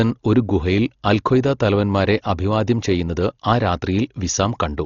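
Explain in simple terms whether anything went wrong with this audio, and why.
The speech sounds dull and muffled from start to finish, as if heard through a thin wall, with nothing at all above about 6.9 kHz. Around the voice there is a rough, fluttery hiss. This is heavy damage that was likely caused by Dolby Digital compression squeezed too hard. To save space, the encoder dropped the highest frequencies and kept very little detail for many others, so the player filled those gaps with noise.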